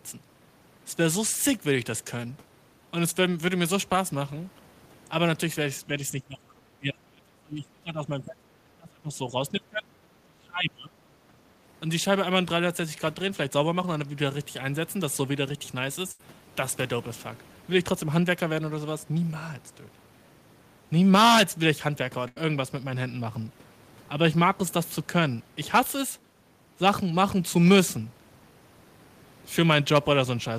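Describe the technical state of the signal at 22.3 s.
At 22.3 s there is a burst of packet loss spanning 22.28 to 22.38 s. Consecutive packets went missing, so the receiver extended the preceding speech for about 80 ms, attenuating it into a fading continuation of the last sound before resuming, with roughly 80 ms of speech gone.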